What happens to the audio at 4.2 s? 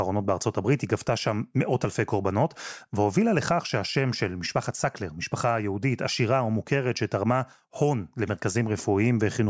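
Nothing goes wrong at 4.2 s; the speech carries on intact through that moment, with no dropout, click, distortion or other fault.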